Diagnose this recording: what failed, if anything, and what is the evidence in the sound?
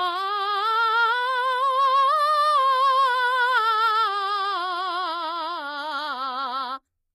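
The codec stage failed: the music was squeezed at a very low bitrate, most likely through HE-AAC compression. Its treble is rebuilt from copied lower bands rather than coded, so highs sound gritty and metallic, the damage is plainly audible throughout, and nothing remains above 15.4 kHz.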